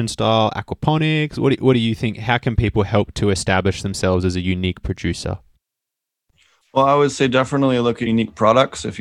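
At 8.05 to 8.07 s, just after "I would say definitely", compressed frames are skipped: about a tenth of a second of speech vanishes, and the audio jumps ahead.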